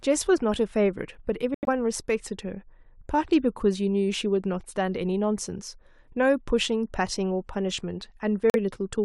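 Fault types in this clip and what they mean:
Corrupt frame muted: Damaged bits in the compressed stream made the decoder reject whole frames. The player filled each rejected stretch with silence. The speech drops out abruptly at 1.54 s and returns at 1.69 s, a hole of about 0.14 s. A shorter hole runs from 8.50 to 8.56 s, about 0.06 s. Each gap spans more than one frame length. The speech resumes on schedule, so the timing is intact.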